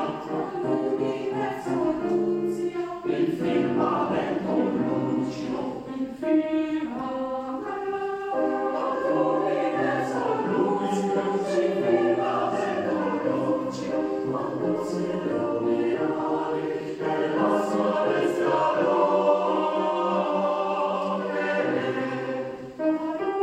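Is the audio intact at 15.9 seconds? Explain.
No. At 15.93 s, compressed frames were skipped. Encoded data was missing or rejected by the decoder as damaged, so playback jumped ahead by roughly 20 ms.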